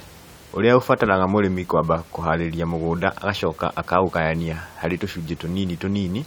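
Nothing stood out on listening to this speech recording; the only thing audible beneath it is the room's own background noise, sitting about 25 dB below the speech.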